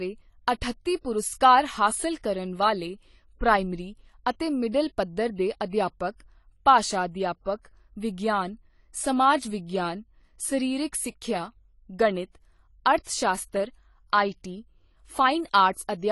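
Throughout the speech, the top end stops dead at 11.5 kHz and sibilants sound smeared and fizzy, the likely result of AAC compression at a low bitrate fitting about 32 kbps. Unlike a simple low-pass filter, the coder's quantisation also leaves audible warbling damage below the cut-off.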